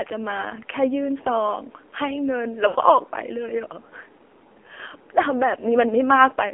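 A speech clip carried over the AMR narrowband mobile codec. The band runs only from about 300 Hz to 3.4 kHz. The voice is plainly buzzy and synthetic, which fits the low 7.4 kbps mode. At 2.68 to 2.76 s there are lost AMR speech frames. The decoder stretches the last good sound for 60 ms, about three 20 ms frames, and it briefly fades.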